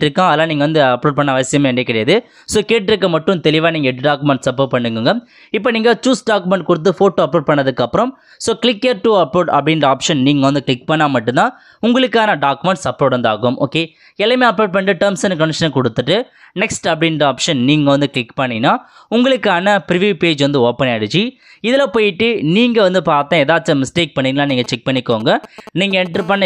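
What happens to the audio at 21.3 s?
At 21.3 s the audio plays through intact, with no dropout, click, distortion or other fault.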